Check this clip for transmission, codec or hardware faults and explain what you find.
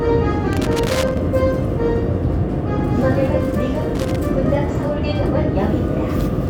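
Loose connector crackle appears twice, from 0.53 to 1.17 s and again from 3.95 to 4.19 s. A worn or dirty contact somewhere in the signal chain is intermittently making and losing contact, so the audio is chopped on and off in rapid, uneven succession, and any DC present on the line turns each break into a pop. In both stretches this comes through as an irregular burst of scratchy crackling.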